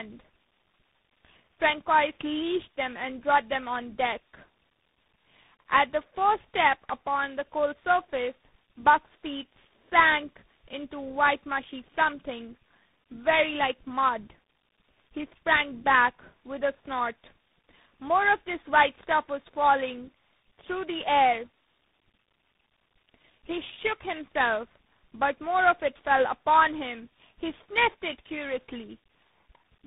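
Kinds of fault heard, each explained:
Tandem speech coding: The speech sounds rough, muffled and warbly, with nothing above about 3.8 kHz. The character points to three lossy speech coders in a row, likely a GSM full-rate stage, then ADPCM at around 24 kbit/s, then CVSD, joined through G.711 links. At each border the signal was decoded and coded again, so every coder worked on the previous coder's already damaged output and the errors stacked up.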